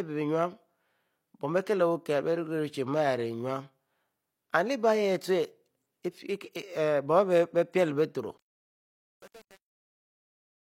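From 8.38 s to the end at 10.77 s, the fade-out shows truncation distortion. The level stage keeps only about 7 bits with no dither, so as the speech sinks toward the smallest step it turns gritty. On the waveform the tail becomes a few blocky square steps; the spectrogram shows broadband harmonic smear on the tail, across a fade that begins around 8.4 s.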